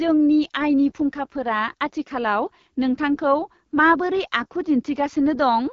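Throughout, the speech sounds rough and raspy with nothing above 7.2 kHz, the AMR wideband (HD Voice) codec's mark, pointing to one of its lowest rates, around 8.85 kbit/s.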